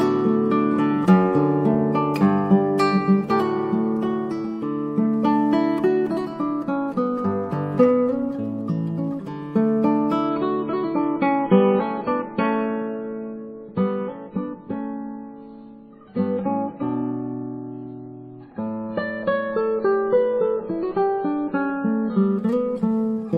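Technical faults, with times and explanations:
10.29 to 22.29 s, adaptive stream at a lower bitrate: a slowed connection forced a sudden switch, fitting MP3 falling from 128 to about 16 kbit/s, so codec artefacts rise and nothing passes above 4.5 kHz. Spectrograms show the top band sharply cut; the waveform shows no gap.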